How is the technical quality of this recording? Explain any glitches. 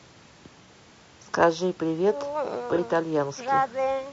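The recording has clearly audible coding damage throughout, plus two brief dropouts.

The whole clip sounds rough and grainy. Noise fills the gaps between harmonics, and the top band sounds thin and synthetic. This is likely low-delay AAC compression, AAC-ELD at 32 kbps. Its short frames resolve pitch harmonics poorly, and the bitrate is too low to cover the damage.

AAC frame loss with concealment occurs at 0.65–0.69 s and again at 2.75–2.80 s. Each gap lasts about 30 ms, which fits a single lost frame. The decoder rebuilt each gap from the last good spectrum, so each sounds like a short smeared, phasey patch.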